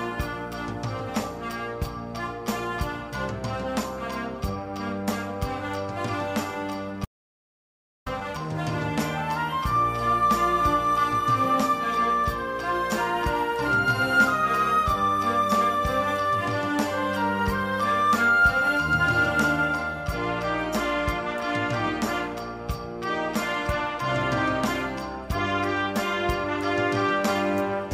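At 7.05 s the audio cuts out mid-flow and stays gone until 8.06 s: an audio dropout to silence lasting about 1.01 s. The input was likely lost for that second, perhaps through a disconnected device or failed link, while recording carried on writing silence. Unlike a natural pause or a noise gate closing, the gap holds no room tone at all, and the sound resumes abruptly rather than fading back, with whatever occurred in between lost.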